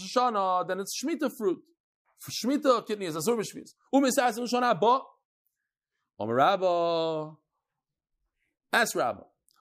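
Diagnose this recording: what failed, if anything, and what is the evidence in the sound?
Nothing failed; no fault is audible anywhere in this recording.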